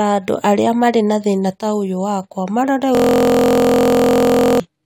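At 2.95 s the speech locks into a system hang loop until 4.60 s. A 23.2 ms piece, which fits a 1024-sample buffer, repeats as a steady 43.1 Hz buzz, replacing about one and a half seconds of audio. The waveform shows identical repeating cycles, and the spectrogram shows a 43 Hz harmonic comb.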